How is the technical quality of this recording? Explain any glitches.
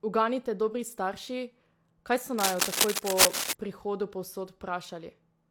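The recording has one clear fault, a burst of cable scratch noise. From 2.38 s to 3.53 s, just after "kaj so", a worn cable, connector or control was likely being moved, making its contact resistance jump rapidly and irregularly. That varying contact injects dense, uneven bursts of noise into the signal path. For just over a second, a harsh scratching and rustling sits on top of the speech, roughly 5 dB louder than it.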